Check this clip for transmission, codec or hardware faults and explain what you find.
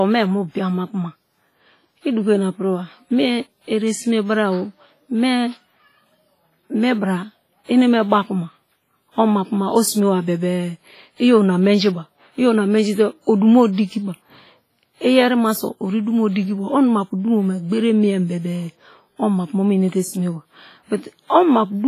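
One codec fault runs through the whole clip, most likely WMA compression. The speech sounds washy, with a ringing quality. A grainy hiss rises and falls with the signal. Nothing is heard above 15.3 kHz. A transform codec with long blocks smears quantisation noise across tens of milliseconds and drops weak spectral lines. That causes the smeared, breathing texture. The heavy damage points to a low bitrate, around 24 kbps.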